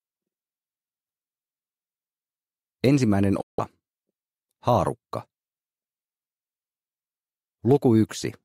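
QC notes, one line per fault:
3.41–3.59 s, Bluetooth dropout: a 0.18 s hole of silence; sound resumes further along, likely from late wireless packets being dropped.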